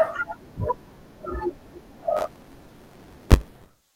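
Speech, with buffer tearing from 2.17 s to the end. From that point a steady robotic buzz sits on the sound at about 94 Hz, which fits a 512-sample buffer. The program filling the ring buffer and the hardware reading it have slipped out of step. Nearly every buffer played holds audio from one lap earlier, roughly 20 ms stale. Each buffer boundary leaves a hard join, and those joins repeating at the buffer rate make the rattle.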